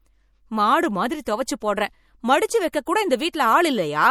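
Throughout the speech, a watery, swirling quality that is plainly audible points to MP3 compression at a low bitrate, likely around 64 kbps. Weak frequency lines drop in and out between frames, and a spectrogram shows flickering holes in the upper bands with everything cut off above 20.3 kHz.

Pre-echo appears from 1.24 to 1.27 s, spread over 29 ms just after "மாடு மாதிரி", again at 1.46 s, also after "மாடு மாதிரி", then at 2.72 s and 3.33 s. Codec noise sized for each attack leaks into the silence before it, heard as a brief hiss and a softened onset. On the waveform, a noise smear precedes each transient.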